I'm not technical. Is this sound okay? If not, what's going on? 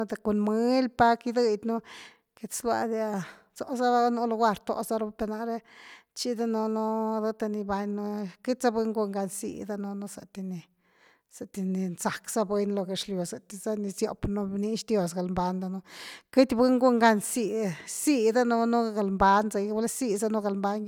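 Yes, nothing in this recording points to any technical problem with the audio signal itself.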